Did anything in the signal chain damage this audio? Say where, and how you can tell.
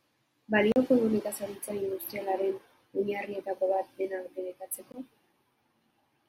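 Yes: blocks of digital silence at 0.72–0.76 s and 4.92–4.94 s, hard-edged, point to output-buffer underruns at the driver or buffer stage.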